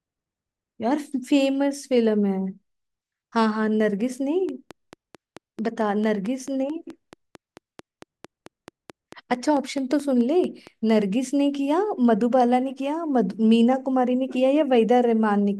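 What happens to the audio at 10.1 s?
At 10.1 s you're in the middle of a train of clicks that runs from 4.49 to 10.91 s. It's a regular tick, about 4.5 per second and around thirty in all, popping a little above the speech. It's likely interference from nearby gear or a faulty connection or power supply.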